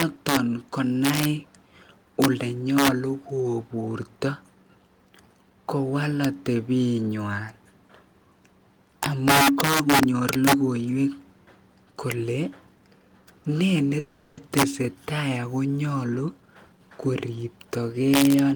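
Throughout the speech, integer overflow is at work: the signal is driven about 6 dB beyond full scale, and instead of being limited, any sample past the largest integer wraps around to the opposite extreme. Only a small fraction of samples, under one percent, cross that line, but each one jumps across the whole range. The result is sharp, violent cracks on the loudest syllables, harsher and more abrupt than ordinary clipping would give.

From 13.99 to 14.39 s there is a call audio freeze, most likely because packets were held up in transit and the jitter buffer ran dry. For 380 ms the receiver stretches the last sound it had into a fading buzz or hiss, which never drops fully to silence. When the audio resumes it picks up exactly where it left off, so nothing is lost, but the stream now runs 380 ms later than before.

From 16.02 to 18.31 s the jitter buffer speed-up follows, as the receiver works off surplus delay held in its buffer. 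It repeatedly cuts out short stretches of one or a few pitch periods, removing roughly 0.4 s in total. Speech in this stretch plays at about 117% of normal speed with the pitch unchanged, so it sounds noticeably hurried.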